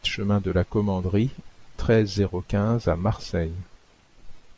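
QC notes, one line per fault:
No faults heard in this speech recording.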